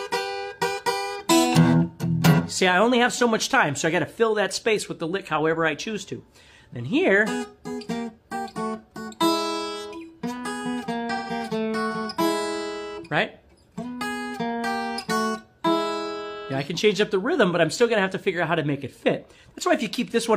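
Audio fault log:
2.31–2.38 s and 11.14–11.30 s: AAC frame loss with concealment. The decoder rebuilt about 43 ms, then 128 ms (likely one and three frames), from the last good spectrum, leaving smeared, frozen-looking spectrogram bands and a disturbed waveform envelope there.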